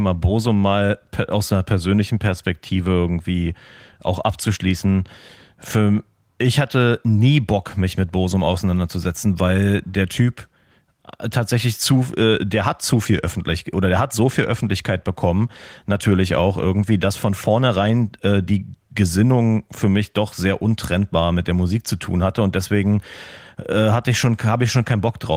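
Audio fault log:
Nothing stood out on listening to this speech clip.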